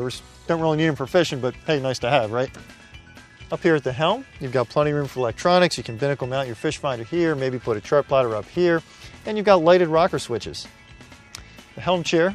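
No technical fault can be heard anywhere in the audio.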